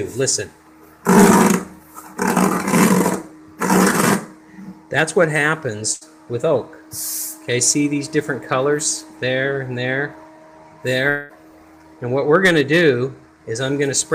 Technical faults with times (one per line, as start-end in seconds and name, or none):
5.93-6.03 burst of packet loss
11.09-11.31 long network dropout